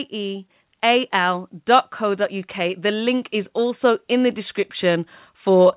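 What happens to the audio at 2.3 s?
At 2.3 s the speech and the background beneath it are both swelling in level together, a slow, steady climb rather than a jump. It is automatic gain rising, which runs from about 0.1 s to 5.76 s: the gain control judged the input too quiet and keeps turning its gain up gradually, so everything it passes grows louder at once. The narrow, muffled tone, with nothing above 4 kHz, comes from the G.711 call path.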